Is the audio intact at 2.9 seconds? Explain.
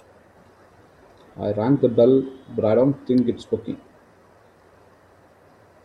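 Yes, the speech at 2.9 seconds is intact, with no dropout, click, distortion or other fault audible at that moment.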